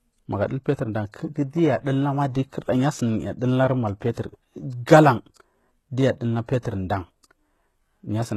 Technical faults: HE-AAC compression

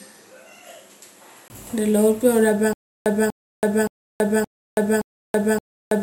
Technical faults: input switched to a poorer device; stutter with silent gaps

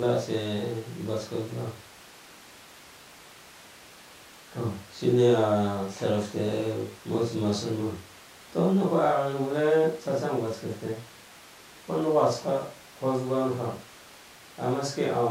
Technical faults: none

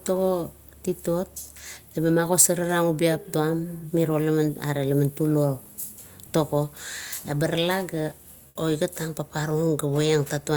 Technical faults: comfort noise in place of the background

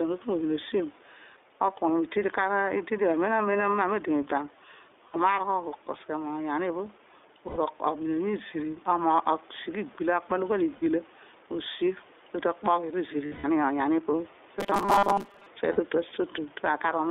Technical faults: gain pumping; iLBC codec; lost iLBC frames; robotic sound from repeated short buffers

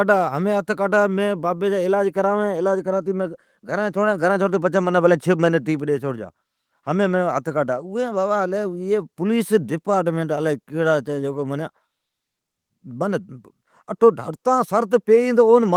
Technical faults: none

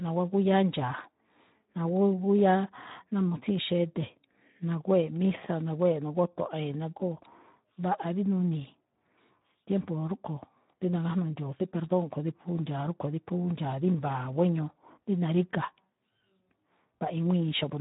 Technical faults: Speex codec

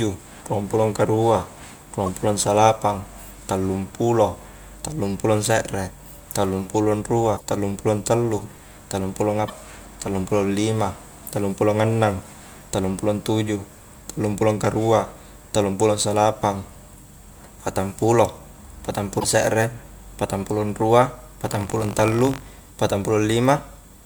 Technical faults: damaged data in a compressed stream; buffer tearing

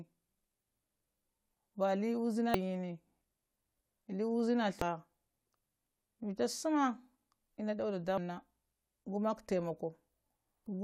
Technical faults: damaged data in a compressed stream

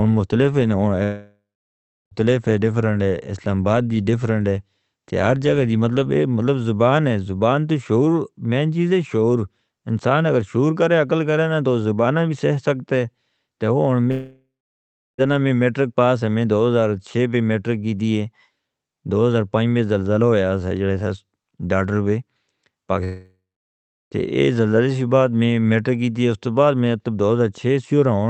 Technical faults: long network dropout

